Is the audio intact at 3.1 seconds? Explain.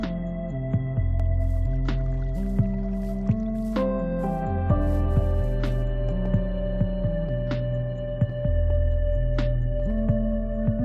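Yes, at 3.1 s the audio is intact, with no fault present at that moment.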